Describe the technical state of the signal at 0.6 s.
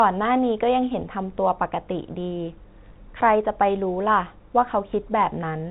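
At 0.6 s the speech is intact, with nothing wrong in the signal beyond the usual telephone-band sound of G.711 coding, which leaves nothing above about 3.8 kHz.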